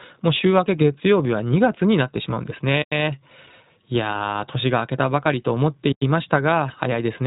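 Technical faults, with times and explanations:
Throughout, iLBC codec: the speech is band-limited with nothing above about 3.8 kHz, and has a plainly audible rough, synthetic edge. Each 20 ms frame's excitation is coded independently at a rate that fits 15.2 kbps, which leaves the narrowband VoIP character.
2.82–2.92 s and 5.92–6.02 s, gap between chunks: two 100 ms holes of silence interrupt the speech, spaced about 3 s apart. That spacing fits audio delivered in 3 s chunks with dead time inserted at each join.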